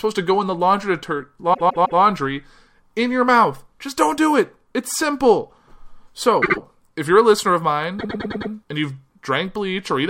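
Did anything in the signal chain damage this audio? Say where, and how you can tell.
Yes. Repeated frames: compressed frames were written or sent more than once, so the decoder replays them as stutters. A 157 ms block plays three extra times at 1.53–2.0 s. A 78 ms block plays twice more at 6.42–6.58 s, just before "if you're a listener". A 105 ms block plays five extra times at 7.98–8.50 s, between "you're a listener of" and "and you've".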